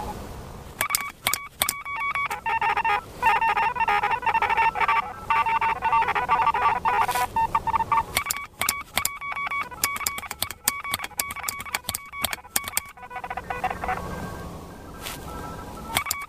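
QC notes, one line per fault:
No faults found.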